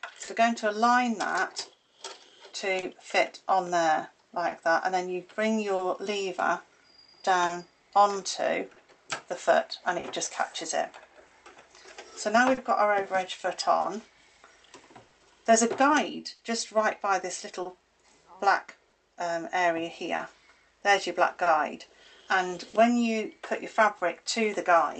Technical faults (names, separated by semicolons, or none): clock drift between sender and receiver; repeated timing corrections; short stall from a late packet; scattered short gaps